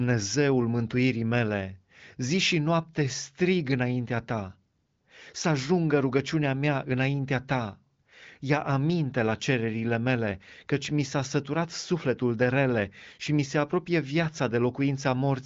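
No technical faults are audible.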